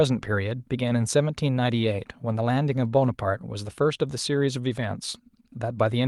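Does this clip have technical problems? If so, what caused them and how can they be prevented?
No, no technical faults heard.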